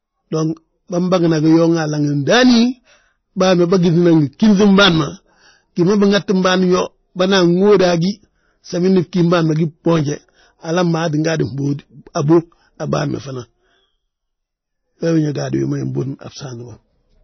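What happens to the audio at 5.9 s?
At 5.9 s, as throughout the clip, the speech sounds watery and dull, likely from heavy MP3 compression at a low bitrate around 24 kbps; a spectrogram shows nothing above 6.1 kHz.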